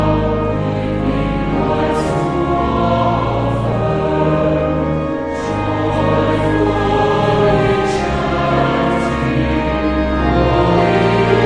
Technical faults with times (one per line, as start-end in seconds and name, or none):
none